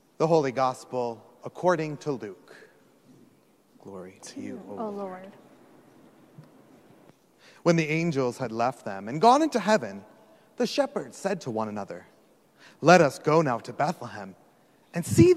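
No technical faults are audible in this audio.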